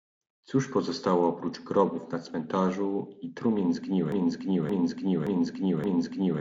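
Speech, carried over the Speex codec with content reaching to about 7.7 kHz and only faint coding damage, jams at 4.12 s: a 0.57 s fragment repeats exactly, back to back, four times through to the end. This broken-record loop is likely a stalled player or stream resending its last buffered piece, so the audio that should have followed is lost.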